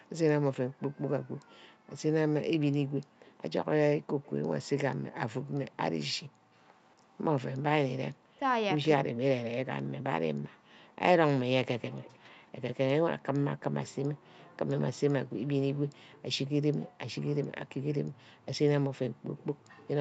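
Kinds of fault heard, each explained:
Background gated by the echo canceller: the canceller clamped the mic while the far end played, so room sound dips up to about 40 dB, briefly, between 0.67 and 14.27 s.
Echo leak: a faint delayed copy of the speech, 221 ms behind and around 25 to 35 dB down, likely a loudspeaker echo the canceller didn't fully remove.
Speech suppressed in double talk: between 8.39 and 9.65 s the speech drops in pieces, by roughly 40 dB, likely because the canceller ducked everything while both sides talked.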